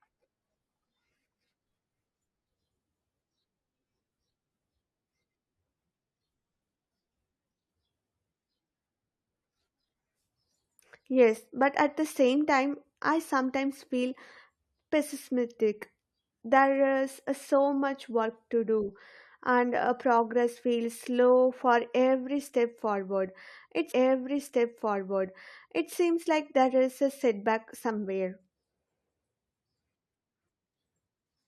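At 23.91 s the speech jumps back and about 2.0 s of programme plays a second time, running to 25.90 s, with a brief blip marking the seam where playback restarts. This is a stream segment repeated: the player fetched or queued the same segment twice, so the audio already heard is delivered again. The duplicated stretch ends just before "seems like there is", where the speech carries on normally.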